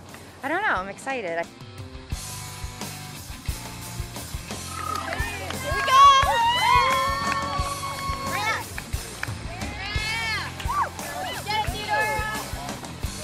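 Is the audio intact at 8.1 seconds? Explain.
No, 8.1 s sits inside DAB burbling from 7.24 to 8.18 s: bubbling, squelchy chirps over the sound, as bit errors slip past error correction and make single sub-bands jump in level.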